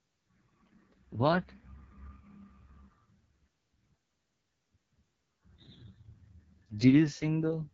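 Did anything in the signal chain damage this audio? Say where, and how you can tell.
Yes, the codec stage did the damage, and it runs through the whole speech clip. This is the AMR wideband (HD Voice) codec at a very low rate, the sound of roughly 6.6 kbit/s, and the voice comes out rough and raspy from start to finish. Nothing sits above 7.5 kHz, and the top band is filler noise rather than real detail. At that rate the pulse-driven vocal tract model is starved of bits, so the excitation gets coarse and grainy.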